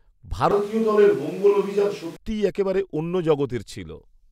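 From 0.51 s to 2.16 s the speech abruptly turns roomy and hollow, drops by about 5 dB, loses bass, and sits over a noise floor only about 30 dB below it, then snaps back just before "একেবারে অন্য". This is a switch to a distant microphone, likely because the close mic's feed dropped out and a far-off pickup took over. On a waveform the section is visibly smaller, with pauses that don't fall to silence. A spectrogram shows thinned low frequencies, reverberant smearing after syllables, and a raised, even noise band between them.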